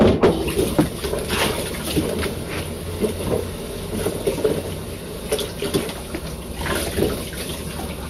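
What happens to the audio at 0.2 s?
At 0.2 s the audio is in a stretch of hard clipping that runs from 0.01 s to 0.81 s. The signal arrives at a stage driven about 14 dB beyond what it can pass, so every peak is sliced off flat at the ceiling. Those squared-off tops generate dense upper harmonics, and with overload this heavy the result is a harsh, gritty fuzz on all the louder sound in that window rather than occasional crackle.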